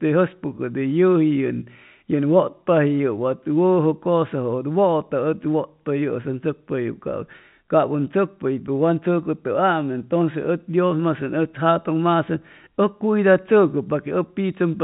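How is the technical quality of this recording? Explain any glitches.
No glitches turn up anywhere in the recording; it's ordinary telephone-band speech, with the top end stopping at around 3.8 kHz, as you'd expect from G.711 A-law coding at 64 kbps.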